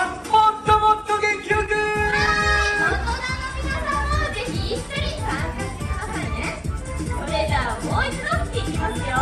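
From about 1.53 to 2.88 s there's a run of repeated stalls, a stutter: the jitter buffer kept running dry, so playback paused in ten brief hiccups, each at most about 14 ms, bridged by stretching the preceding sound. Nothing's lost, but it drags.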